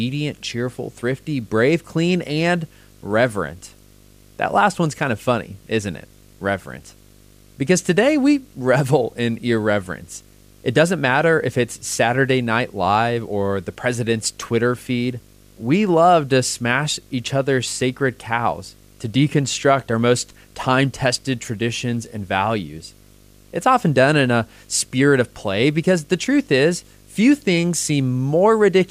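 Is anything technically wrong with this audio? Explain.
Yes, there's one problem. Video or display buzz runs through the whole speech clip: a screen or video cable is leaking into the audio, giving a 50 Hz field-rate buzz with hash above it and a 15.6 kHz line whine, sitting roughly 30 dB under the speech.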